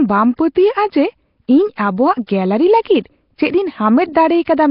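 A short speech recording carries a rough, hissy halo and a smeared, underwater quality from start to finish, with nothing above 5.3 kHz and heavy coding damage. That points to Nellymoser compression as the likely cause, at a rate that fits roughly 22 kbps. The old Flash codec spends a fixed two bits per sample on blocks of 256 samples and fills starved bands with noise. That noise fill sets it apart from a plain low-pass or band-limited recording, which would sound dull but clean rather than grainy and watery. Pre-echo appears twice, from 0.36 to 0.39 s (about 24 ms) and from 2.27 to 2.29 s (about 20 ms). Each time, a brief hiss rises just before a sharp onset and the attack itself sounds blunted. Because the coder spreads quantisation noise across a whole block, noise sized for the loud attack also spills into the quiet instant ahead of it. The smear comes before the onset, unlike reverberation or post-echo, which trail after it.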